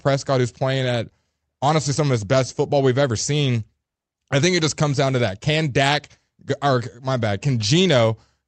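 The speech signal shows no technical faults, carrying only the ordinary coding character of a call path whose audio band tops out near 8 kHz, which fits an Opus-coded call working as intended.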